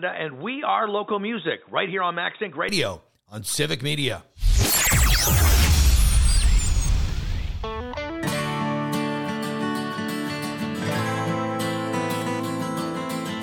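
The recording likely began on a poorer input device, an input switched to a poorer device, before the system changed to a better one at 2.69 s. From 0.0 to 2.69 s the audio is band-limited, with nothing above 3.8 kHz, so it sounds dull and boxy. It sits roughly 5 dB quieter and carries its own background noise, around 35 dB below the signal. At 2.69 s the sound opens up and clears abruptly, with no silence at the changeover.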